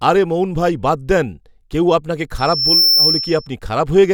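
Loudspeaker feedback squeal runs from 2.38 s to 3.48 s, starting just after "বাদ দেন কেউ আপনাকে". A microphone is hearing the loudspeaker it drives, and at 5.4 kHz the loop gain tops one, so that frequency feeds on itself. It swells over a few tenths of a second into a piercing, steady whistle that sits roughly 5 dB above the speech before it stops.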